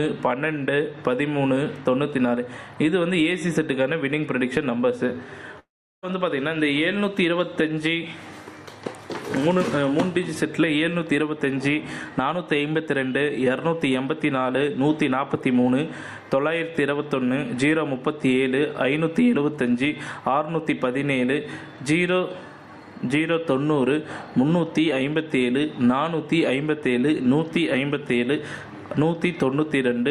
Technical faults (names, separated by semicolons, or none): long network dropout